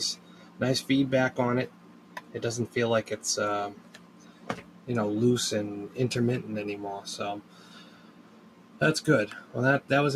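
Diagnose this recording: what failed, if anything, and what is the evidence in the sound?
Call processing: a speech noise suppressor was left on and applied to music or sounds. It reads steady content as noise, so the level pumps by around 10 dB.

Sound cut by the noise suppressor at 0.16–0.61, 1.68–2.36, 3.73–4.88 and 7.4–8.81 s: held material sinks by about 8–9 dB each time.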